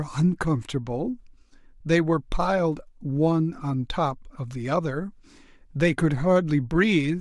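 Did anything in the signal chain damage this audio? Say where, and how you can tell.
No, nothing along the way from capture to playback has left any audible damage on this speech recording, so there's nothing to trace back to a stage.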